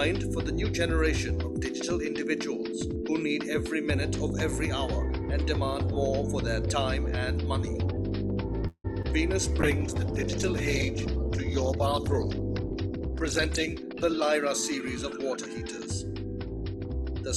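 At 8.67 s the sound stops moving and its last moment is drawn out as a buzzy or hissy tone that fades, ending in roughly 70 ms of silence before the audio resumes where it stopped at 8.86 s. This is a call audio freeze, likely caused by delayed packets emptying the jitter buffer. A spectrogram shows flat, smeared harmonics fading into a blank strip.

At 9.02 to 9.06 s comes short concealed packet loss. About 20 ms never reached the decoder and was filled by continuing the preceding sound. It is heard as a brief smear or wobble. On a spectrogram it is a thin vertical slice of blurred, over-smooth texture.

From 9.62 s to 15.80 s a call bitrate drop takes the encoder from 64 kbps down to 13 kbps, where it stays for about 4.3 s. The coarser coding makes the audio rough, watery and muffled. A spectrogram shows the high band cut off under a hard ceiling with a grainy texture below it.

During the low-rate stretch, the jitter buffer speed-up happens three times: at 12.69 to 13.09 s the audio runs at 109%, and at 13.68 to 14.35 s and 14.82 to 15.54 s it runs at 107%. 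Each time, roughly 50 ms of pitch periods are removed. The audio sounds hurried while the pitch stays the same, and the waveform shows those stretches compressed in time with their cycle shape unchanged.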